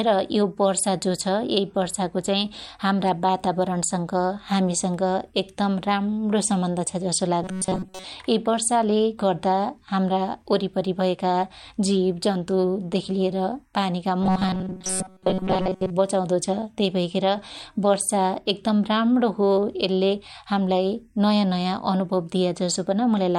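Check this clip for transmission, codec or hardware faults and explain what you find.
Two stretches of robotic sound from repeated short buffers. The first runs from 7.42 to 8.05 s, after "राम्णो सम्बन्ध छ जसो" and before "यै वर्षाले गर्दा हाम्रा". The second runs from 14.22 to 15.90 s, after "जन्तु देखी लिएर पानिका" and before "बचाउदो छ". The speech turns into a rigid metallic buzz at 188 Hz. The likely cause is audio arriving too seldom, with a slice of about 5.3 ms replayed to fill the gap. Most of the real audio in these stretches is lost.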